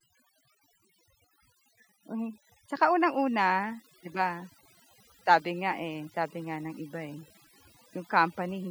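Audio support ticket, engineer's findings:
Overdone noise removal, throughout. Denoiser set too aggressive: bands near noise estimate gated off, taking quiet speech detail with them. Background dropped, breaking into twinkling specks.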